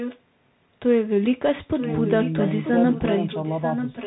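The speech runs through a Bluetooth CVSD headset codec for its whole length. Nothing above about 3.9 kHz survives. S sounds turn scratchy, a granular hiss sits underneath, and loud bright moments distort as the one-bit slope coder falls behind. The damage fits a 64 kbps CVSD link. A delayed copy of the speech also comes back, at 0 to 0.19 s, 1.75 to 2.72 s, and 2.92 s to the end. It trails by 937 ms and sits roughly 10 dB below the direct sound. This is likely an echo leak, where a far-end loudspeaker echo slipped past the echo canceller.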